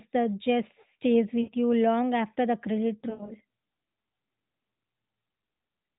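Lost AMR speech frames hit this narrowband phone speech at 1.42 to 1.51 s and 3.10 to 3.33 s. There the decoder, missing about 60 ms and then 120 ms of frames scattered over 200 ms, repeats its last pitch and vocal-tract settings with falling gain, briefly smearing and dipping the sound. The AMR narrowband path passes nothing above 4 kHz, with light coding colour that fits the 12.2 kbps mode.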